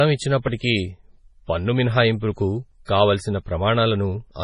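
Throughout the speech, the top end stops dead at about 10.5 kHz, and weak detail flickers in and out, giving a watery, swirly texture with smeared consonant onsets. That points to likely MP3 compression at a very low rate, near 24 kbps. A plain low-pass filter would dull the sound without that frame-to-frame swirl.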